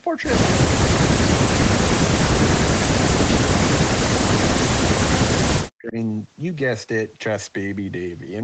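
From 4.42 s to 5.97 s the speech is cut back hard, dropping by about 40 dB at its deepest and dipping for roughly a second and a half before recovering. The pattern is that of speech suppressed in double talk, likely from an echo canceller that could not tell the near talker from loudspeaker echo while both sides spoke, so it attenuated everything. The band-limited character, with nothing above 8 kHz, comes from the call's microphone processing.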